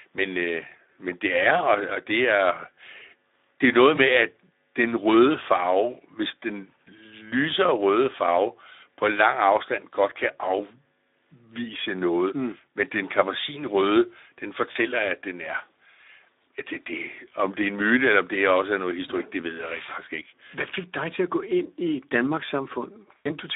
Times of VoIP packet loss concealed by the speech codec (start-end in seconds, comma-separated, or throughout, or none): 3.95-4.00, 14.71-14.78, 23.18-23.32